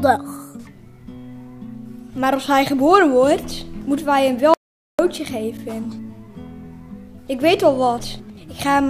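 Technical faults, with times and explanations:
4.54 to 4.99 s, audio dropout to silence: the sound stops dead in mid-flow and returns just as abruptly, with about 0.45 s of silence between. There's no room tone or noise floor in the gap, so the signal itself wasn't reaching the recorder; the likely cause is the input dropping out briefly, from a loose connection, a link hiccup or an accidental mute, while the recorder kept writing silence. Whatever sounded in that half-second is simply gone.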